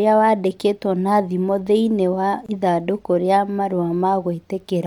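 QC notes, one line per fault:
2.46–2.49 s, gap at a join of encoded pieces: a gap of about 25 ms opens in continuous speech, with smeared edges, and the speech then resumes exactly where it broke off. The pieces were encoded separately and butted together untrimmed, so encoder start delay and last-frame padding remain as silence. Unlike a dropout, nothing is missing; unlike a click, there is no transient, only a hole. The join spacing fits pieces about 4 s long.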